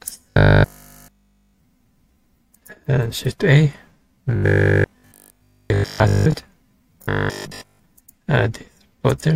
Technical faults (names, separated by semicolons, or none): robotic sound from repeated short buffers